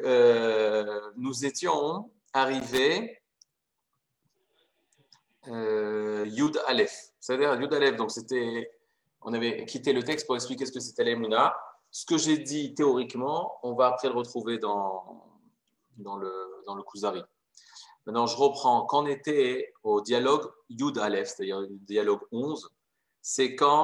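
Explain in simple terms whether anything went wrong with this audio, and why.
Loose connector crackle at 2.60 to 2.79 s and 10.12 to 10.19 s: a worn or dirty plug contact briefly broke and remade connection, chopping the audio into scratchy bursts.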